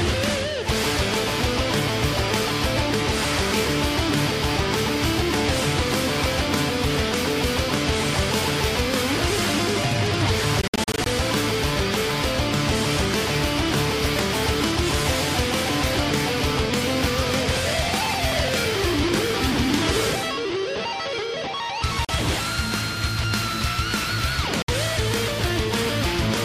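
Audio packets most likely failed to reach the Bluetooth headphones in time and were dropped, a Bluetooth dropout. From 10.62 to 11.06 s the sound breaks up into a cluster of short silent holes, about 0.2 s lost in total, the longest gap 61 ms. Single holes follow at 22.05 to 22.09 s (41 ms) and 24.62 to 24.68 s (61 ms). After each hole the sound resumes further on, as if it had kept playing.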